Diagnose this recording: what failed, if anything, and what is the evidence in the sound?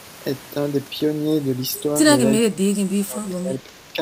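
Speech suppressed in double talk, from 2.48 to 3.72 s, a call-processing fault. Across that span the speech dips sharply, at its deepest by around 20 dB, with about a second in all pulled down or broken up rather than one steady fade. The likely cause is the echo canceller meeting simultaneous talk from the far end. Unable to tell this talker from its own loudspeaker echo, it attenuated everything it heard.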